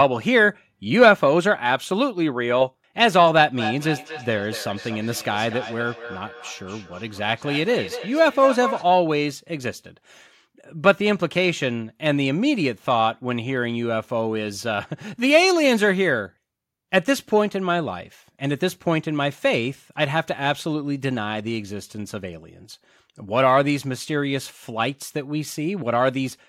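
A speech recording in which two devices in the same room were joined to one call, so one loudspeaker replayed what the other microphone had sent and that microphone captured it again, out of reach of either echo canceller. The result is feedback echo between two devices from 3.58 to 9.03 s: the speech returns at a steady interval of roughly a fifth of a second, with the loudest repeats about 12 dB below the direct speech.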